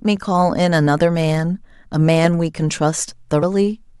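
At 3.42 s there's a case of compressed frames skipped: codec frames never got decoded, so the speech jumps ahead about 50 ms.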